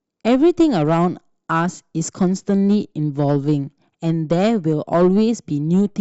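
Speech recording, no audible technical faults anywhere in the clip.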